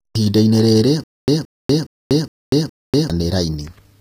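Speech whose treble sounds gritty and metallic, with s sounds turning lispy and nothing above about 15.5 kHz. The treble doesn't match the lower harmonics, which points to HE-AAC compression, likely at a low bitrate around 24 kbps. The codec keeps only the lower spectrum and rebuilds the top by copying lower bands upward under a coarse envelope, so the upper harmonics are synthetic rather than original. From 1.04 s to 3.10 s there is a stutter with silent gaps: the same 171 ms burst plays, then about 243 ms of dead digital silence, repeating at an even 415 ms pace for five repeats. The likely cause is a stalled stream replaying its last buffered fragment on each retry before running empty, so the audio that belonged in that stretch is lost.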